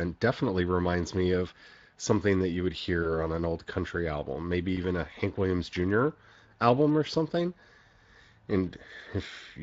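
Throughout the clip, the speech has been coded with the Speex codec at a setting that fits a bitrate of around 20 kbps. At that rate the CELP encoder has too few bits to describe the excitation signal accurately, so the damage is plainly audible: the speech carries a grainy, hoarse roughness.

From 3.03 to 3.1 s, between "something that you would" and "on an old country", there is VoIP packet loss concealed by the speech codec. About 20 ms of data went missing, which fits a single lost frame. The decoder filled the gap by extending its last pitch and filter settings at falling gain, producing a brief, fading smear of stretched sound. That error carries into the following frames, so the sound stays weak and distorted until about 3.1 s.

A second concealed packet loss occurs from 4.75 to 4.79 s, just after "old country album maybe". Again about 20 ms is lost, pointing to one dropped frame. 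The decoder's extrapolation produces a short, fading blur in place of the missing audio before normal decoding resumes.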